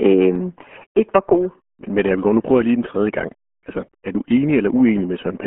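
From start to finish the speech has been squeezed through the RealAudio 14.4 codec, a low-rate dial-up speech coder whose heavy damage fits an 8 kbit/s stream. The audio is confined to a telephone-like band of roughly 200 Hz to 3.4 kHz, with nothing above 3.7 kHz, so sibilants and brightness vanish. The coarse coding leaves the speech muffled, gargly and smeared.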